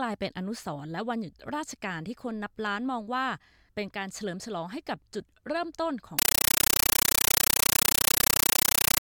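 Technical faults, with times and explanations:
6.19 to 9.02 s: compressed stream played as audio. The sound gives way to very loud, chattering static. This fits an AC-3 bitstream at 448 kbps being passed along as ordinary samples without decoding. Each 9.33 ms burst of data-noise is followed by silent padding, repeating 31.25 times a second. On the waveform it shows as dense blocks separated by flat gaps, and the spectrogram has broadband vertical stripes spaced at that rate.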